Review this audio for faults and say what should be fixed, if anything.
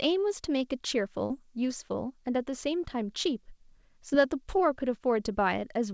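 Two short concealed packet losses occur in this speech. The first runs from 1.26 to 1.32 s, where 40 ms of audio arrived too late to be decoded. The receiver synthesised 38 ms to cover it. The second runs from 4.10 to 4.13 s, with 20 ms missing and 16 ms filled. In each gap the decoder continued the preceding sound, then blended back into the real signal. Each is heard as a brief smear or wobble. The call path itself carries nothing above 8 kHz, which fits the G.722 wideband codec. To prevent these gaps, stabilise the network link or give the jitter buffer more headroom so late packets still arrive before playback.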